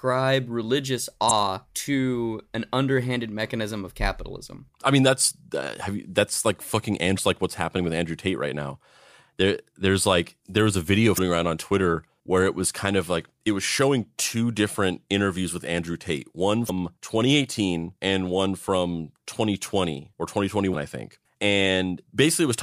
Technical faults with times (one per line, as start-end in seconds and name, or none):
1.27-1.31 damaged data in a compressed stream
7.15-7.19 damaged data in a compressed stream
11.14-11.19 damaged data in a compressed stream
16.66-16.70 damaged data in a compressed stream
20.70-20.75 damaged data in a compressed stream